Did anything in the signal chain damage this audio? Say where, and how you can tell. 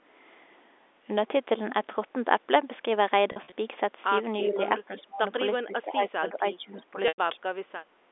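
Yes, at the network and call-processing stages. Packet loss with pitch repetition appears twice. From 3.32 to 3.52 s about 100 ms of audio is missing, scattered over 200 ms in runs no longer than 40 ms, so the receiver's concealment repeats the last pitch period and each gap sounds like a briefly held, buzzy tone. At 7.08 to 7.18 s a solid 100 ms block, which fits five 20 ms packets, is lost. The repeated cycle fades out over about 50 ms, leaving a short silence before the speech cross-fades back in.

An echo leak, likely from a loudspeaker on the far end whose echo canceller let part of the playback back into its microphone, returns a delayed copy of the speech 345 ms late. It is clearest at 4.38 to 4.6 s, about 15 dB below the direct speech. Fainter scraps follow at 4.98 to 5.02 s (about 30 dB down) and at 6.77 to 6.82 s (about 25 dB down). The consistent 345 ms delay identifies them as echo rather than reverberation.

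Speech suppressed in double talk comes from the same echo canceller. While both sides were talking, it likely could not separate its own talker from the loudspeaker echo and turned both down. The speech dips by roughly 10 dB at 4.41 to 4.6 s, and drops much more deeply, around 25 dB, at 4.86 to 5.24 s. A longer dip of about 15 dB spans roughly a second between 5.65 and 6.97 s, and a brief cut of around 20 dB occurs at 7.35 to 7.45 s. Through all of this the G.711 telephone band, which ends below 4 kHz, remains audible.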